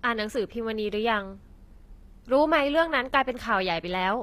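Throughout the speech, the upper spectrum sounds synthetic rather than recorded, with nothing above 14.9 kHz. The treble extends high but its harmonics don't line up, and sibilants turn gritty and metallic. This is likely HE-AAC compression rebuilding the highs from copied lower bands, consistent with roughly 24 kbps.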